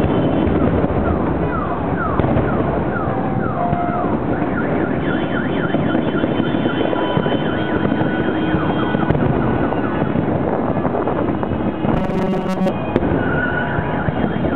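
From 11.94 to 12.70 s the sound goes robotic from repeated short buffers: a rigid, metallic buzz at 188 Hz. Likely the audio arrived too seldom, so roughly 5 ms chunks got replayed for much of that stretch while the real material was skipped.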